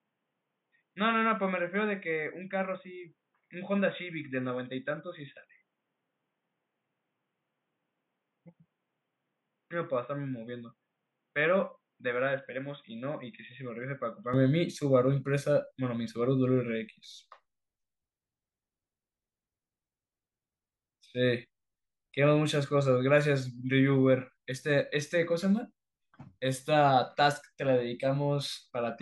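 Speech, with an input switched to a poorer device from 0.0 to 14.34 s: dull, boxy sound cut off above 3.8 kHz, a little quieter with faint new noise, likely a narrower-band microphone, clearing without a gap.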